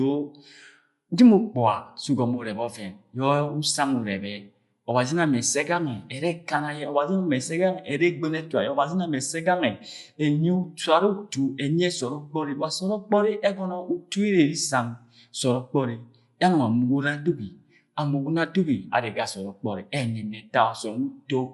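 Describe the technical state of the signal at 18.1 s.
At 18.1 s the speech carries Bluetooth LC3 compression, present across the whole clip: nothing above about 11.5 kHz, and a breathy, grainy sheen where upper detail is replaced by filler noise, likely from LC3 at a rate that fits 48 kbps with 10 ms frames. Unlike a clean low-pass, the remaining top end sounds hissy.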